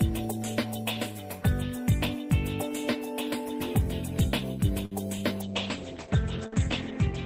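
At 4.85 s there is a short stall from a late packet. A packet arrived after it was due, and the jitter buffer ran dry. The receiver held the last bit of sound for about 59 ms while it waited. Then playback resumed from the same point, so nothing is lost. Everything after it runs about 59 ms later. You hear a brief smear where one sound hangs on too long, with a faint buzz.

From 5.42 s to the end there is a call bitrate drop. The bandwidth estimate fell, and the encoder was pushed onto far fewer bits. The sound points to a fall from around 32 kbps to around 9 kbps, held at the lowest level for about 1.7 s. The upper frequency limit falls from 20 kHz to 8 kHz. The result is dull and muffled, with a rough, watery texture that lasts to the end.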